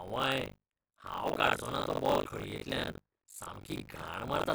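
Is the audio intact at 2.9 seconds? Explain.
No. Chunks out of order occur from 2.84 to 2.92 s. A 40 ms chunk was written late and plays one chunk after its proper place. Nothing is lost, but the order is scrambled. Three hard joins make a brief jumbled moment.

Buffer tearing also runs through this moment. The writer and reader of the ring buffer cross every period. Roughly a third of each buffer repeats audio about 70 ms old. This gives a steady 50 Hz robotic buzz, which fits a 20 ms period.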